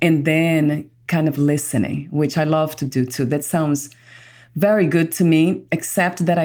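No technical faults can be heard anywhere in this speech recording. There is nothing in the audio that calls for comment.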